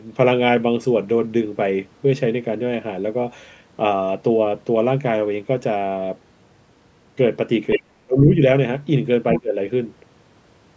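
At 7.7 s a brief scrap of the other side's voice leaks through, only about 5 dB under the speech, most likely residual echo that the echo canceller missed; it shows as an overlapping harmonic stack. From 7.76 to 8.37 s the speech is suppressed in double talk, dipping by around 35 dB, likely the canceller ducking both voices; the waveform visibly collapses and the spectrogram thins to near-silence for roughly 0.7 s. At 9.3 s a weaker leak, about 10 dB down, likely has the same cause, followed from 9.39 to 9.57 s by another double-talk dip of around 20 dB, a shallower gap lasting roughly 0.2 s.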